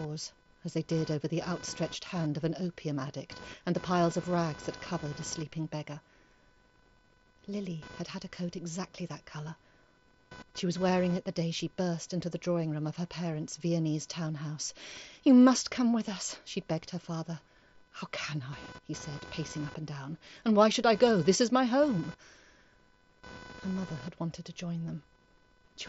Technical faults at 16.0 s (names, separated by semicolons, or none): computer activity noise; concealed Bluetooth headset packet loss